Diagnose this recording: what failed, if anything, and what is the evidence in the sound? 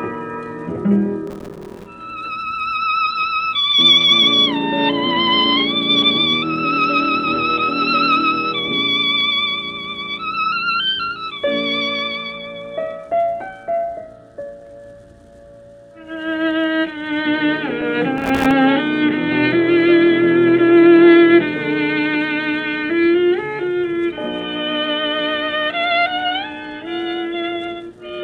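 Processor overload crackle at the driver/buffer stage: gritty bursts at 1.27–1.86 s and 18.18–18.51 s, where dozens of missed, roughly 3 ms buffers dropped out as silent gaps.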